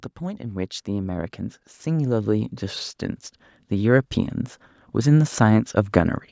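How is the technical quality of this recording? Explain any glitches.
The recording has one clear fault, an automatic gain rising from 0.2 to 2.9 s. It passes through call microphone processing that leaves nothing above 8 kHz. Over those 2.7 s the automatic gain control judged the input too quiet and lifted its gain by about 9 dB, so the speech and background noise swell together. On a waveform the envelope widens in a steady ramp. A spectrogram shows every band, including the noise floor, brightening at once.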